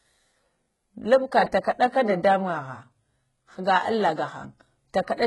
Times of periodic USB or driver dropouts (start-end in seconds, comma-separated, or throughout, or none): none